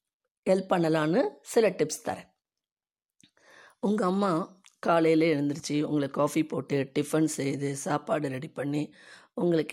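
No technical faults can be heard anywhere in this speech recording. There is nothing to mark in time and nothing to explain.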